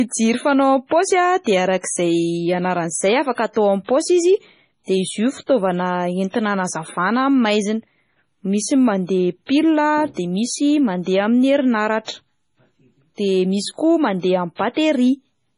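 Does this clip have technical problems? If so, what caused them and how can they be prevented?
Yes. Throughout the speech there is heavy damage from what is likely MP3 compression. Nothing remains above 10.5 kHz, and weak spectral detail switches on and off between frames, giving a watery, swirly texture with smeared onsets and chirpy s sounds, consistent with a very low bitrate around 24 kbps. To prevent it, encode at a higher bitrate or keep an uncompressed or lossless master.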